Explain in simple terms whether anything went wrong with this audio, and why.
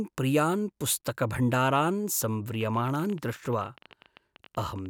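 Something did go wrong. From 2.55 s to the end at about 4.87 s, a train of clicks runs over the speech: around forty sharp ticks at roughly 16 per second, unevenly spaced and about as loud as the talking itself. Unlike a single pop or random crackle, these clicks all sound alike and keep coming, even in the gaps between words. The likely cause is electrical interference or a faulty connection or power supply injecting pulses into the recording.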